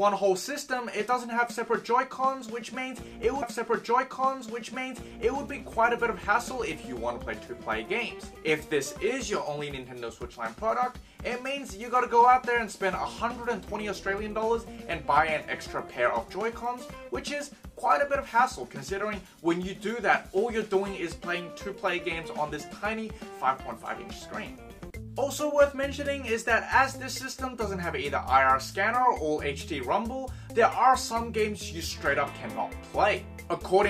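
At 3.42 s, a stream segment is repeated. The player queued the same segment twice, so about 2.0 s of audio plays again until 5.41 s, after a small blip at the jump back.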